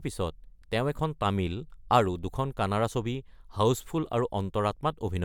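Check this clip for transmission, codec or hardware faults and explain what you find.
Nothing in this speech recording points to a fault anywhere along the chain. There is no moment where the sound shows signs of trouble.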